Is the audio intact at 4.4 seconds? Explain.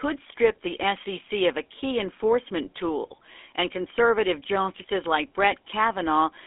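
No. At 4.4 seconds the speech carries GSM full-rate codec damage across the whole clip: pulse-driven vocal-tract coding gives a buzzy, gravelly roughness, with nothing above 3.8 kHz. That grit sets it apart from plain band-limiting.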